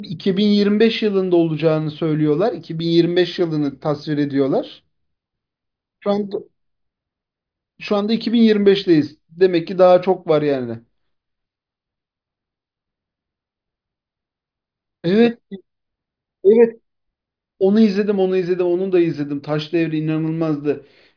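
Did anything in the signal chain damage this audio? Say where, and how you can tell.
No, nothing along the chain has left an audible mark on this recording, and the signal arrives intact with no stage showing damage.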